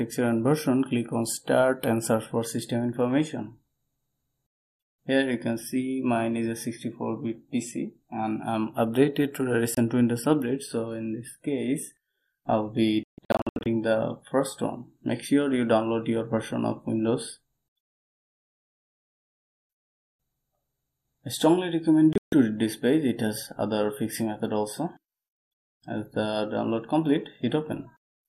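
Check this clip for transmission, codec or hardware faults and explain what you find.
Three digital broadcast dropouts occur, at 9.75 s, from 13.03 to 13.66 s, and from 22.13 to 22.33 s. The receiver stopped getting valid frames and muted until clean ones arrived. The first is a single 24 ms gap. The second is a cluster of holes totalling about 0.41 s spread over 0.62 s, the longest 144 ms. The third loses about 0.17 s within 0.19 s. The gap lengths fit frames of about 24 ms. Audio sent during each hole is gone, not delayed.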